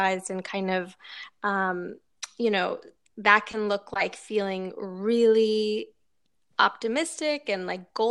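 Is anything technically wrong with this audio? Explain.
No, nothing is technically wrong with this audio.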